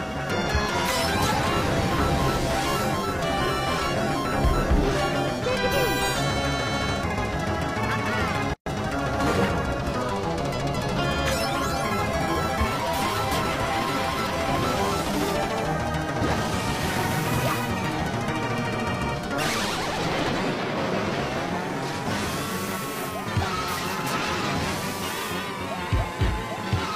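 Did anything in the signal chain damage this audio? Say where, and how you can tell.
Yes. At the codec stage there is a gap at a join of encoded pieces: the sound drops to silence from 8.54 to 8.66 s, about 127 ms, with smeared edges, then resumes where it stopped. Separately encoded segments were concatenated with their encoder delay and final-frame padding left untrimmed.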